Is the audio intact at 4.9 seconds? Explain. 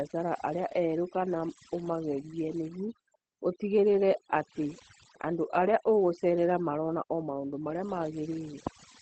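No. Overdone noise removal runs through the whole clip: bands near the noise floor are cut hard, leaving twinkling specks and a spectrogram background gone nearly black with isolated dots. Opus voice compression in SILK mode also covers the whole clip, with coarse excitation coding at what sounds like roughly 12 kbps. The speech is muffled and slightly robotic, and the spectrogram shows nothing above about 8.6 kHz.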